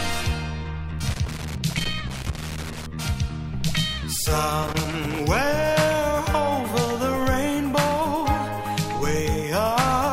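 The audio has two bursts of loose connector crackle, from 1.10 to 2.86 s and from 4.63 to 5.20 s, where a worn or dirty contact keeps making and breaking, chopping the signal into irregular scratching. A waveform shows ragged dropouts and spikes, and a spectrogram shows scattered broadband vertical streaks.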